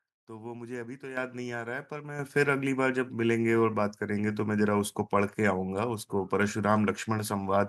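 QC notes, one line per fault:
1.17 s and 2.19 s, microphone volume stepped up: the input gain jumps by about 9 dB, then about 6 dB more, each in a single step. The mic level was raised in one step, so the voice and the room noise get louder together rather than fading up.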